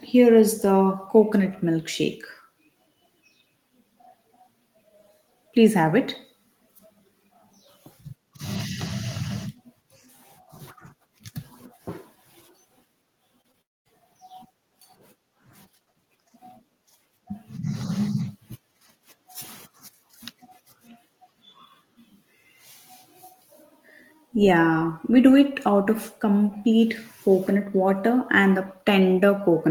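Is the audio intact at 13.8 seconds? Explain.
No: a long network dropout runs from 13.61 to 13.87 s, likely from audio packets never arriving. The receiver stretches the last sound into a fading buzz, then near-silence, and about 0.24 s is lost.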